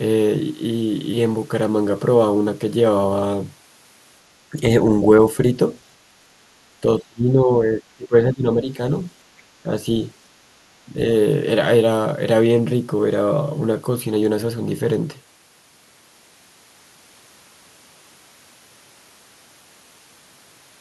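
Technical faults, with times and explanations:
4.51 to 4.56 s, speech suppressed in double talk: the speech dips briefly by around 5 dB, likely because the echo canceller mistook overlapping far-end sound for echo and turned everything down. The main voice gets quieter, with no second voice added.
6.81 to 8.78 s, speech suppressed in double talk: this is the deepest and longest dip, roughly 20 dB down across about a second and a half in total. The speech is turned down, likely as the canceller kept clamping down while both sides spoke.
9.38 to 9.42 s, other side's voice leaking through: a faint scrap of a second voice slips through, very low at around 40 dB under the speech, likely echo the canceller left in. This adds sound, while the suppression faults take sound away.
9.63 to 9.70 s and 10.93 to 10.99 s, speech suppressed in double talk: two more short dips of around 5 dB, likely the same clamping during overlap. 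Each is a brief loss of level in the main speech and is much milder than the long drop at 6.81 s.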